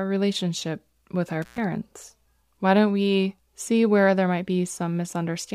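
Intermittent contact at 1.42 to 1.60 s, just after "relationship with our": a loose cable or plug briefly loses its connection, so the signal path opens and the speech drops out for about 110 ms of that span. Crackle marks the edges as the contact scrapes open and then closes again, and during the gap a faint hiss remains in place of the speech before the line reconnects and the sound returns.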